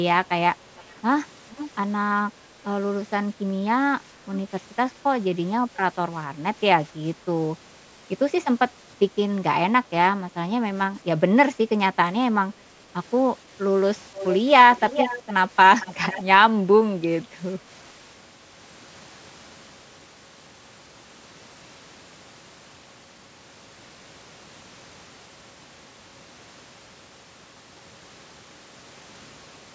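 A delayed copy of the speech trails it by about 0.46 s, barely audible at 0.78–0.83 s and faint at 1.51–1.71 s. It returns much stronger at 14.14–14.35 s and 14.76–15.33 s, at its loudest nearly matching the speech itself, then falls back to a faint level at 15.8–16.23 s. This is echo leak, likely from a loudspeaker on one side of the call whose echo canceller let the returning sound through.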